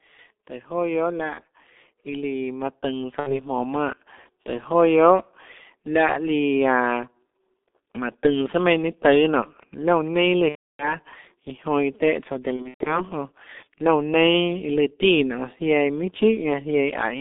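The whole 17 seconds of speech has gone through the G.723.1 codec, and it's heavily damaged. The band runs only from about 250 Hz to 3.6 kHz, so it sounds thin and muffled. The hoarse, smeared consonants fit a low-rate codec around 6.3 kbit/s that works in 30 ms frames and only slowly updates its model of the voice.

VoIP packet loss concealed by the speech codec breaks in four times. At 1.34 to 1.41 s about 30 ms goes missing, and at 3.20 to 3.41 s about 60 ms. In both spots the decoder stretches the last sound into a brief buzzy tone or coloured noise that fades out. At 10.49 to 10.95 s a gap of about 300 ms turns into a short fading sound that the codec then mutes. At 12.56 to 13.07 s roughly 210 ms is lost in pieces across 300 ms, and the longest break is 120 ms. After each gap the speech stays weak or distorted for a moment before it recovers.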